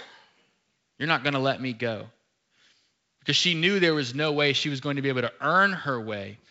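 Nothing goes wrong anywhere in this bit of speech, which sounds like ordinary G.722 wideband telephone audio at 64 kbit/s, with at most a faint trace of the codec to be heard.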